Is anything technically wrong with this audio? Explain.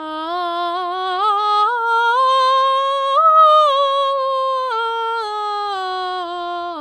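No technical faults are audible.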